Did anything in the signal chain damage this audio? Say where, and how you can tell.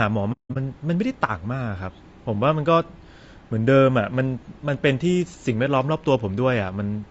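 Yes. At the codec stage, the whole clip has low-delay AAC compression damage, most likely from AAC-ELD. The speech sounds rough and grainy, with noise filling the gaps between harmonics and a thin, synthetic-sounding top band, which fits a low bitrate near 32 kbps. The coarse quantization at this bitrate can't code the pitch harmonics cleanly, so on a spectrogram the harmonic striations look smeared and speckled, and the upper band looks patchy and blocky.

At the network or transport stage, AAC frame loss with muting hits from 0.32 to 0.56 s. About 210 ms of audio is missing across that 240 ms span, and the longest gap runs roughly 200 ms. The decoder zeroed the missing spectra, and the overlapping windows blur the edges. On the waveform the envelope tapers to silence and back without a sharp step, and the spectrogram shows a clean vertical gap with soft edges.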